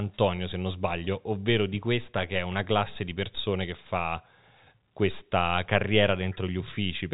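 Nothing stood out on listening to this speech, which comes across as ordinary G.711 telephone audio with nothing above about 3.8 kHz.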